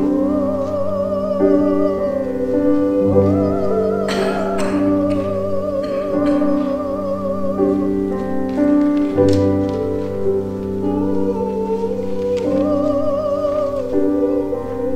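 No dropouts, clicks, distortion, level jumps or timing disturbances can be heard anywhere in the signal, and nothing in it points to a technical problem.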